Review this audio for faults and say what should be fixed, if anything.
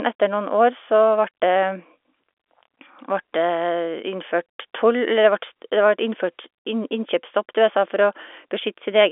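No faults; nothing needs fixing.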